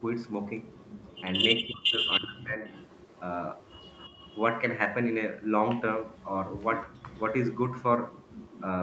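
Echo leak from 0.25 to 1.21 s, likely from a far-end loudspeaker whose echo canceller let residue through, is a faint copy trailing by 316 ms, about 25 dB down.

Speech suppressed in double talk follows from 1.62 to 2.64 s. The talker's voice dips by up to roughly 25 dB for about a second, likely because the canceller mistook overlapping speech for echo.

Echo leak returns from 2.11 to 4.42 s at 262 ms delay, about 20 dB down. It reappears briefly at 6.14 to 6.27 s (262 ms, about 25 dB down) and from 7.07 to 8.64 s (202 ms, about 20 dB down).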